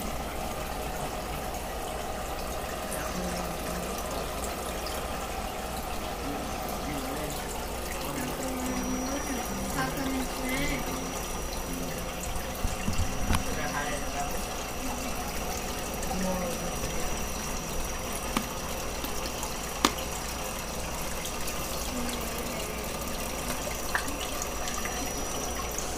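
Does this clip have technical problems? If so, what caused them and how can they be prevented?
Yes. A feedback whistle runs from 8.56 s to the end: a thin, steady 5.8 kHz tone sits roughly 15 dB below the sound, swelling and fading slowly. This is likely a loudspeaker-to-microphone loop hovering at the edge of oscillation without building up. Lowering monitor gain, repositioning speakers away from the microphone, or notching around 5.8 kHz would prevent it.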